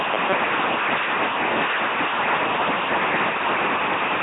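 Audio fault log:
throughout: LPC-10 vocoder. The speech is heavily damaged into a buzzy, mechanical robot voice. Each moment is rebuilt from either a pulse train or noise through a simple vocal tract filter, which fits a 2.4 kbit/s coder. Nothing is heard above 3.8 kHz.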